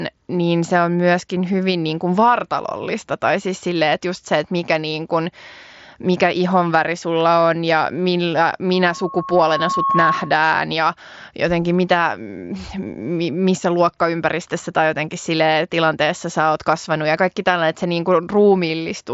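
A microphone picked up the loudspeaker it was feeding, and around 1.1 kHz the loop gain rose above one, producing loudspeaker feedback squeal from 8.73 to 10.47 s, just after "sulla on ja millä". The tone swells over about a second and a half into a steady squeal roughly 5 dB louder than the speech, then drops out before "ja jotenkin mitä". It rides over the mSBC headset's band-limited audio, which stops near 7.7 kHz.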